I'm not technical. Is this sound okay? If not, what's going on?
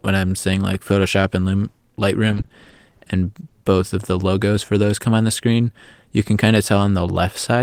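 No. From 2.27 to 3.67 s, just before "of the logos for", the speech turns choppy and robotic. That's repeated packet loss: 15 short gaps, each patched by stretching the previous sound.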